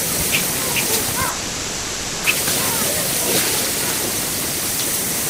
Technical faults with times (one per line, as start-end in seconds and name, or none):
1.29-2.25 call audio freeze